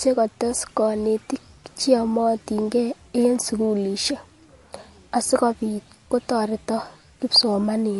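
Throughout, the speech sounds watery and swirly with nothing above about 11.3 kHz, likely MP3 compression at a low bitrate around 48 kbps dropping weak frequency lines.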